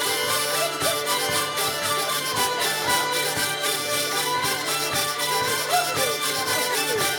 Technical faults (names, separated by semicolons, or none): none